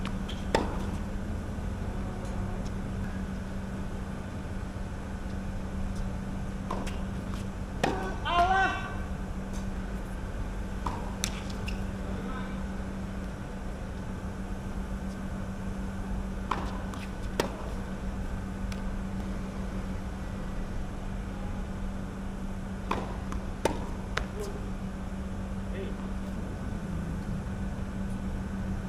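No dropouts, clipping, glitches or other technical faults turn up anywhere in the recording.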